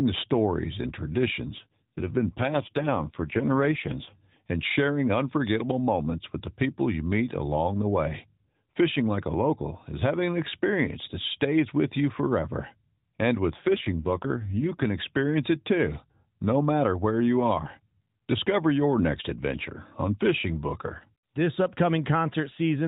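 A speech clip carried over a narrowband mobile link, with nothing above 4 kHz. It has two AMR rate drops. From 1.46 to 4.19 s, after "the stories and", the voice turns rough and buzzy. It happens again from 13.50 to 14.86 s, before "experience it too no". The band stays the same and there is no gap. The roughness fits a switch from the 12.2 to the 5.9 kbps mode, with the saved bits going to error protection.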